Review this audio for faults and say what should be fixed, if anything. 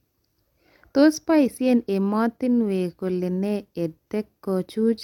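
Generation loss runs throughout. The speech sounds swirly and hollow, with nothing above 17 kHz. This is likely from about three repeated lossy encodes, fitting AAC near 96 kbit/s.

Keep a lossless master and encode to the lossy format only once, at the final step.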